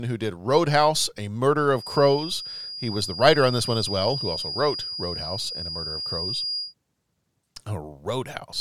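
From 1.72 s to 6.75 s a feedback whistle sits behind the speech: a thin, steady tone at 4.8 kHz, roughly 10 dB below the speech level, swelling and fading slowly in level before it stops. The likely cause is a loudspeaker-to-microphone loop running just at the edge of instability, where gain at that one frequency is high enough to sustain a ring but not high enough to build into a runaway howl.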